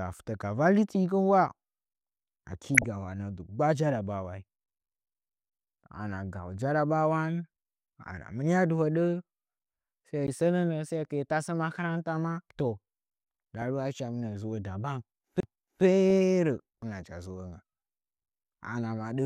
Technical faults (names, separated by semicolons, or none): DAB burbling; CD skip